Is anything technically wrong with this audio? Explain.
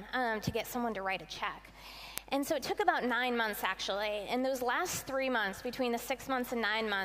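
Yes. Word clock ticks run from 0.27 to 6.93 s: about twenty sharp ticks, roughly every 0.3 s. An unlocked receiving clock, off by roughly 70 ppm, drops or repeats one sample each time. Their steady spacing sets them apart from random clicks.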